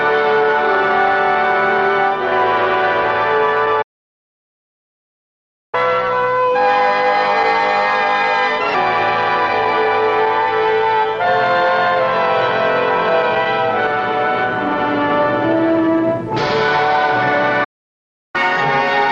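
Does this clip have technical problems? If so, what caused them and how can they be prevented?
Yes. A playback stall, likely caused by the player running out of buffered data or having its thread blocked, cuts the output to silence from 3.82 to 5.75 s (about 1.9 s) and again from 17.64 to 18.36 s (about 0.7 s), before the sound resumes where it stopped. A deeper playback buffer and a higher-priority audio thread would keep the stream fed.

Catch-up at higher speed follows each stall as the player resamples its backlog to recover lost time. From 5.75 to 8.75 s it runs at 1.15 times speed, raising pitch about two semitones. From 18.36 s to the end it runs at 1.25 times speed, about four semitones higher. Limiting catch-up to small rate changes, or using time-stretching that keeps pitch constant, would prevent the audible shift.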